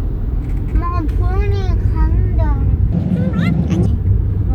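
From 2.92 s to 3.86 s, a section at the wrong speed runs about 1.82 times faster than the surrounding audio. Pitch and tempo jump together at once: the sound turns high and hurried, raised by roughly ten semitones, then drops back abruptly. The likely cause is that stretch being resampled or clocked at the wrong rate. On a spectrogram, the energy in that span shifts upward and its events are squeezed closer in time. The waveform looks visibly denser there.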